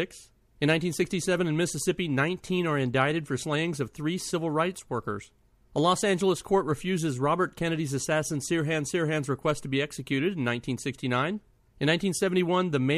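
No technical faults can be heard anywhere in this speech recording.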